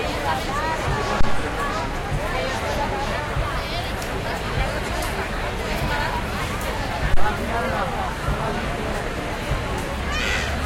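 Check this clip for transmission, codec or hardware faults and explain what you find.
Two low-frequency thumps stand out. A phantom power thump occurs at 1.21 to 1.51 s and again at 7.14 to 7.29 s. Each time, a supply switching on or off on the live input sends a voltage step through the coupling capacitors. The result is a deep thud peaking around -6 dBFS that dies away within 68 ms and 34 ms respectively.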